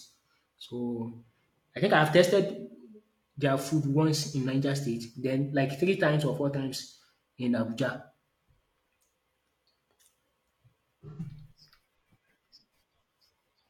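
From 11.10 to 11.20 s, AAC frame loss with concealment: the decoder rebuilt 85 ms, consistent with two lost frames, from the previous spectrum, leaving a brief smeared, phasey patch.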